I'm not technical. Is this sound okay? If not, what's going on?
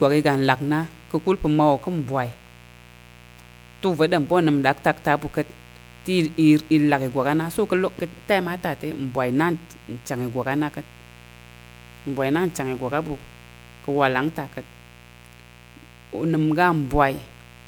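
No, it isn't quite okay. There are two problems, and both run the whole way through the speech.

The first is a mains buzz. Something in the recording chain, like a light dimmer, a power adapter or a cable without proper shielding, let interference from the electricity supply leak in. It repeats at the 60 Hz rhythm of the mains, with sharp spikes that stack up into higher tones, so you hear a steady, gritty rasp rather than a soft hum. It sits clearly below the speech, but it's there the entire time.

The second is generation loss. The speech sounds smeared and a bit hollow, with a watery, swirly quality, and the starts of sounds lose their crispness. The likely cause is that the file was saved as an MP3, opened, and saved as an MP3 again, maybe three times over. Each save throws away a little more detail in slightly different places, and the damage builds up beyond what a single save would do.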